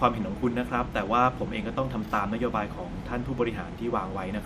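No audible faults detected.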